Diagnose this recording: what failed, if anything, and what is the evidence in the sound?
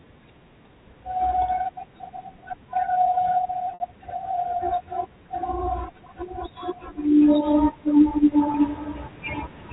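Packet loss with pitch repetition at 3.74 to 3.80 s and again at 8.52 to 8.54 s, a network-stage fault in this speech carried over G.711 telephone coding. The first gap is 60 ms, which fits three consecutive 20 ms packets lost. The second is 20 ms, pointing to a single packet. The receiver filled each hole by repeating the last pitch period, so the spot at 8.52 s sounds like a briefly held, buzzy tone, while the longer gap at 3.74 s fades into silence before the speech returns with a short cross-fade.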